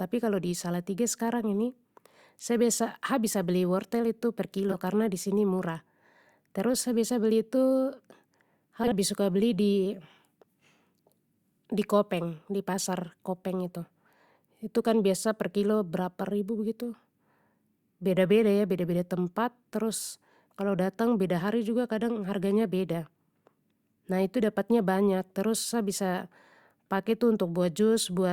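At 4.70 to 4.75 s, right after "beli wortel tu per" and before "karna disini murah", you get frames out of order: two neighbouring 20 ms chunks got decoded in swapped order, which fits single frames trading places. It comes out as a quick garbled flutter. The same thing happens again at 8.84 to 8.93 s, this time with 40 ms blocks swapped, so it's a longer smear. No time goes missing either way.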